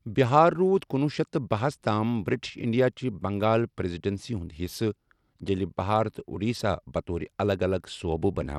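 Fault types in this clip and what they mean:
Bluetooth SBC compression: the top end keeps thinning and flickering through the whole speech clip, with a gritty, aliased haze riding on it. That's likely SBC starving its upper sub-bands of bits, and the damage fits a rate around 96 kbps.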